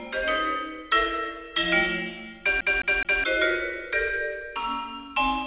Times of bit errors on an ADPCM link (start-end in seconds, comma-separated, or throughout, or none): none